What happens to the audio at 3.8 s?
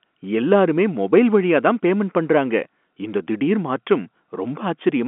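Nothing goes wrong at 3.8 s: the speech carries on intact through that moment, with the narrow telephone-band sound of G.711 coding and no dropout, click or distortion.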